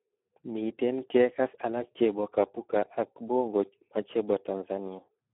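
From start to finish the speech carries heavy Speex codec damage, consistent with a low setting around 8 kbps. Starved of excitation bits, voices turn hoarse and noisy, confined to roughly a 250 Hz to 3.4 kHz line band with nothing above 3.8 kHz.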